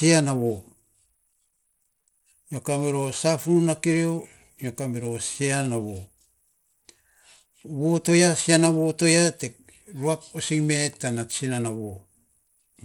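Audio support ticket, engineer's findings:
Treble dropping in and out, gritty noise riding on speech, entire clip. Likely Bluetooth SBC compression at a small bit pool, consistent with about 96 kbps: top sub-bands starved of bits, lower bands coarsely quantised. Spectrogram: blinking, patchy upper bands, nothing above 19.7 kHz.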